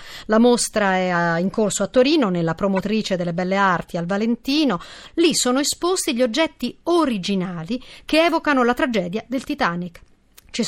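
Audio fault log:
2.76–2.78 s and 3.83–3.90 s, corrupt frame decoded: in this speech, damaged compressed frames were decoded and played as if intact. Their flipped bits turned into wrong gains and misread spectral codes, placing energy at frequencies the signal never had. The first, between "nella promozione" and "delle belle", spans a couple of frames and gives a brief glitch peaking around -15 dBFS. The second, just after "delle belle", covers a few frames and is a fainter glitch near -30 dBFS.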